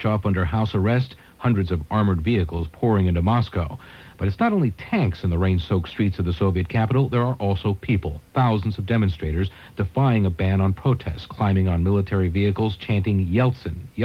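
Nothing in the recording stood out as a fault on listening.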